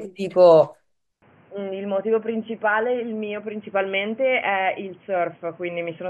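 At 1.22 s the speech abruptly turns dull and boxy with no gap, and stays that way to the end. This is likely an input switched to a poorer device. Everything above 3.3 kHz vanishes, so a spectrogram shows a hard ceiling appearing at that moment. The waveform drops by roughly 10 dB, and a new noise floor sits around 30 dB below the speech, visible as a faint band filling the pauses.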